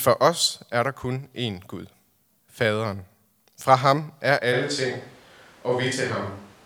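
At 4.54 s the speech turns abruptly roomy and hollow, with thinner bass and a background noise floor around 25 dB below the voice. Loudness holds roughly steady to the end. This switch to a distant microphone likely follows a failed close microphone. A spectrogram shows weaker low frequencies and smeared reverberant tails.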